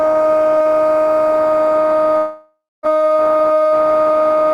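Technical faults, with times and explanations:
2.17 to 2.86 s, long network dropout: the music suddenly loses its detail and the last sound carries on as a smeared, fading buzz, followed by about 240 ms of near silence before the music returns further along, with around 0.66 s of it simply gone. The likely cause is a stretch of audio that never reached the receiver. The player stretched its final fragment to cover the hole, then ran out and fell quiet.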